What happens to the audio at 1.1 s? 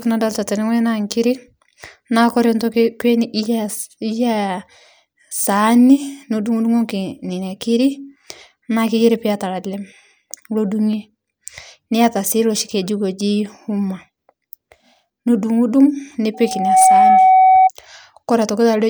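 Nothing goes wrong at 1.1 s; the speech there plays through cleanly, with no dropout, click, distortion or other fault.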